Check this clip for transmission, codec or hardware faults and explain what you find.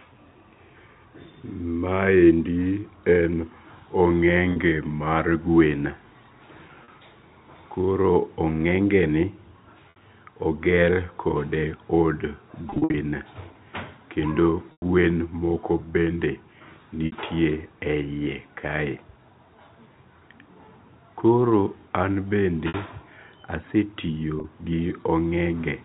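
The clip has one recurring fault, packet loss with pitch repetition, over telephone-band G.711 audio. It occurs at 4.52 s (40 ms, before "mar gwen"), 6.84 s (40 ms), 9.9 s (60 ms, before "oger kod"), 12.7 to 12.94 s (160 ms lost in runs up to 60 ms), 14.72 s (100 ms, before "gwen moko bende"), 17.06 s, 22.68 s (60 ms each) and 24.4 s (40 ms). The lengths fit 20 ms packets. At each gap the receiver loops the last pitch period, so the sound briefly holds on a buzzy, frozen tone. In the 100 ms gap the loop fades toward silence before a cross-fade back. A plain dropout would leave a hole or a click, but these gaps are filled with a repeated pitch.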